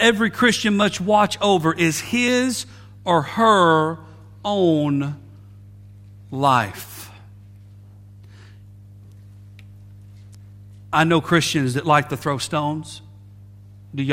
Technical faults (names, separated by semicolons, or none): mains hum